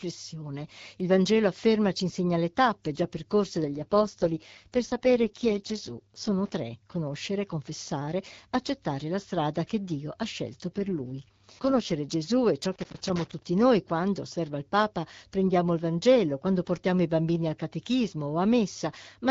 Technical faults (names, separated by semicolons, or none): AMR rate drop; loose connector crackle